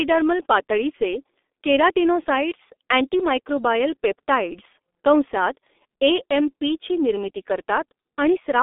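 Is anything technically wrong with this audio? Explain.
Yes. Throughout, the speech carries G.723.1 codec damage. Nothing survives above 3.8 kHz and the band sits near 250 Hz to 3.6 kHz. The heavy hoarseness and smeared consonants, unlike simple bandwidth filtering, point to a slow-updating low-rate model, fitting about 6 kbit/s.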